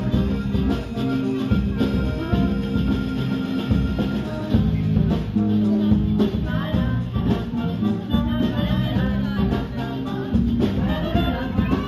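Imaging from linear upsampling runs through the whole clip. The sound was raised to a higher rate by joining samples with straight lines. That is a weak filter. The spectrum points to a 16 kHz original lifted to 48 kHz. The top of the original band is dulled. A faint mirror copy sits between 8 kHz and 16 kHz, roughly 40 dB below the signal. It adds a light metallic shimmer to the bright, hissy parts of the sound.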